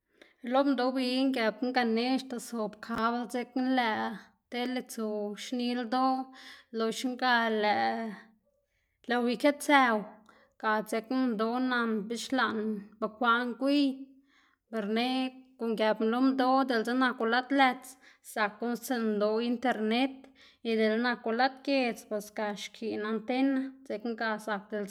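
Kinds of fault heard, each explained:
Dropped samples: The stream likely lost a tiny fraction of a millisecond of data, so the waveform leaps abruptly to a later value. Each leap is heard as one sharp click in the speech, at 5.87, 8.06 and 17.21 seconds.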